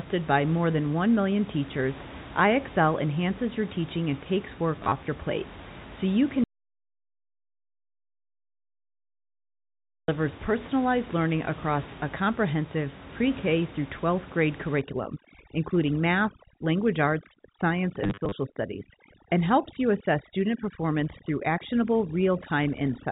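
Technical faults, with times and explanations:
4.76 to 4.92 s and 18.04 to 18.32 s, packet loss with last packet repeated: the receiver lost about 80 ms, then 140 ms, of short scattered packets (runs up to 30 ms, which fits 10 ms packets) and replayed the previous one each time. The repeats land out of step with the pitch, so the sound stutters robotically.
6.44 to 10.08 s, audio dropout to silence: the input was most likely cut off by a disconnected device or failed link while recording carried on writing silence. The sound stops abruptly for about 3.6 s in dead silence, without even the room noise, then resumes mid-flow.
14.81 s to the end, overdone noise removal: a noise reducer set far too strong switches off individual frequency bands that sit near its noise estimate, including quieter parts of the speech. The background drops and breaks up into twinkling specks.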